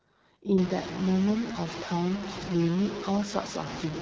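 The speech passes through the AMR wideband (HD Voice) codec at one of its lowest modes. The rough, raspy quality fits a rate of about 8.85 kbit/s. At that rate the codec's pulse-driven model of the vocal tract has too few bits to rebuild each voice faithfully, so the speech sounds plainly coarse and buzzy throughout. The band stops at 7.4 kHz, and the top of it is filled with synthetic noise rather than real detail. From 0.58 s to the end, the sound also becomes grainy and gritty in a way that tracks the speech. This is most likely low bit depth without dither, consistent with truncation to a 4-bit word length. Because the rounding error follows the signal instead of being randomised, it forms a harsh distortion only about 10 dB below the speech. Quieter stretches break up and sputter rather than fading smoothly.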